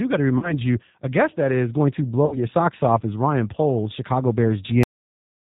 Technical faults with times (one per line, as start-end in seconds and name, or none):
0.00-5.55 G.729 codec
0.38-0.54 VoIP packet loss concealed by the speech codec
2.26-2.38 VoIP packet loss concealed by the speech codec
4.83-5.55 cut-off end